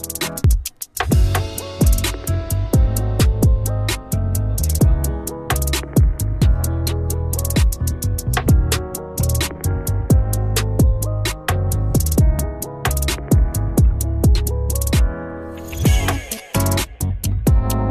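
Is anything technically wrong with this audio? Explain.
Yes. There is an overlap between stream segments, heard as tiny skips at 0.44, 6.42 and 12.39 s, repeating roughly every 6 s, which fits the segment length. At each boundary, two segments' time stamps overlap, so the player discards about 6 ms of audio that was never actually duplicated. The waveform jumps abruptly at each point, and a spectrogram shows a thin vertical broadband line there.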